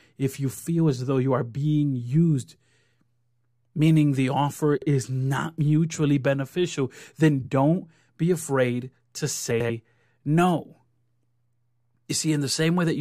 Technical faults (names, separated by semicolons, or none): frames out of order